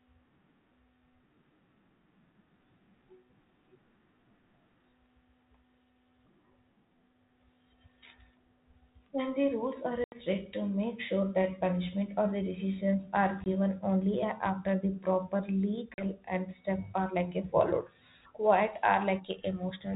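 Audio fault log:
10.04–10.16 s, 13.44–13.47 s, 15.94–16.05 s, packet loss on an ADPCM call: runs of packets go missing (about 80, 20 and 40 ms) after "rules are", "or the decisions are" and "the proper". The hard-edged silences leave the decoder's predictor and step size mismatched, so speech resumes slightly distorted before settling, on band-limited audio that fits 32 kbit/s G.726.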